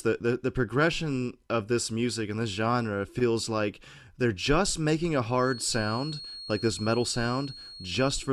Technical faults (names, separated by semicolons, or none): feedback whistle